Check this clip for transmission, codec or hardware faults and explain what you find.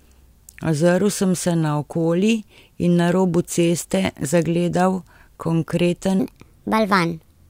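One fault is present. From 6.20 s to the end at 7.50 s, a section at the wrong speed plays back 1.37 times too fast. The likely cause is playback or editing against the wrong clock. Speed and pitch rise together, so the speech turns hurried and about five semitones higher.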